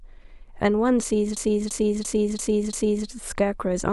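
From 1.37 s to 3.07 s, a system hang loop occurs. The system froze while the hardware kept replaying one buffer. A 0.34 s slice of speech repeats five times, at 2.93 per second. It sounds like a machine-gun stutter. This fits a 16384-sample buffer.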